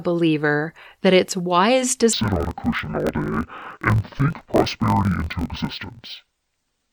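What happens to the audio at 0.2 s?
At 0.2 s the audio is intact, with no dropout, glitch or other fault at that moment.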